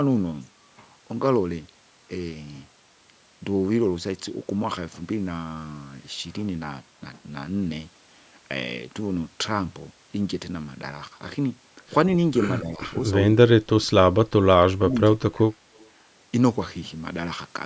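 From 12.59 s the speech starts getting chewed up in a way that points to speech suppressed in double talk, which is likely what happened here. The far end was apparently talking at the same time, and the echo canceller couldn't tell this talker from loudspeaker echo, so it pulled everything down. There are short dips at 12.59–12.82 s (around 10 dB) and 13.0–13.13 s (a small one, maybe 5 dB). Then it gets much deeper, roughly 25 to 30 dB, at 13.59–14.16 s, 14.73–14.95 s and 15.11–15.65 s, where the voice nearly drops out in chunks.

Right after that, at 15.77–15.89 s, there's a faint echo leak, likely from the other side's loudspeaker. Their canceller didn't fully scrub what its mic picked up, so a copy of the voice comes back about 125 ms late. It's very quiet, something like 35 dB under the speech, just a brief ghostly scrap sitting on top of a band that stops at 8 kHz.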